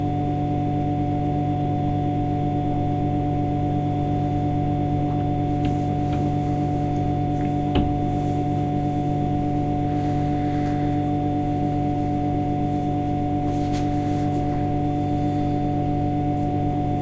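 No technical faults can be heard anywhere in this recording of sounds; the signal holds steady throughout.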